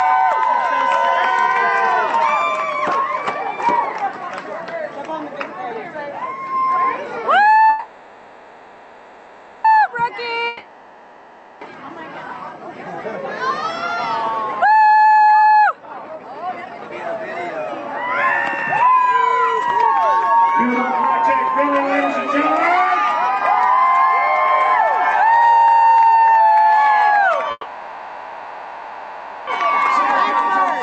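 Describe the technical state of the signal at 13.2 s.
At 13.2 s the signal is intact, with no fault present, only the ordinary character of the WebRTC call path it travels through, whose Opus coding limits the audio to about 8 kHz of bandwidth.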